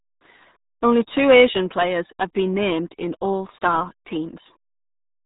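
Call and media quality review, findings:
RealAudio 14.4 codec artefacts, whole clip. Speech muffled and gargly. Nothing above about 3.8 kHz. Heavy codec damage, consistent with RealAudio 1 at a rate that fits 8 kbit/s. Dial-up-era speech coder. Discards the upper band. Coarse coding smears the rest.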